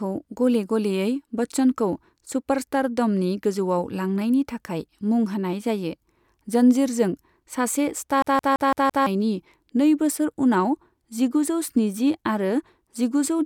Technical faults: CD stuck on one turn

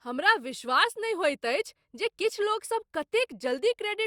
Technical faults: none

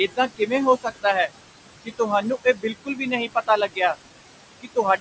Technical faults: noise suppressor artifacts; speech cut by the noise suppressor

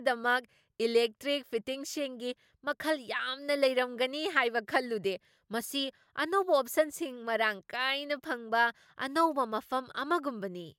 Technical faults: none

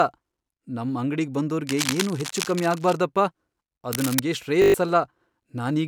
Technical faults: cable scratch noise; system hang loop

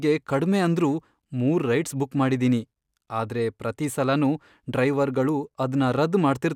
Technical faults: none

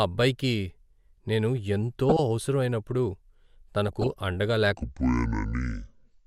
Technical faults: DAB burbling; section at the wrong speed

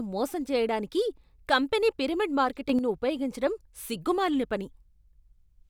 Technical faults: sudden gain jump

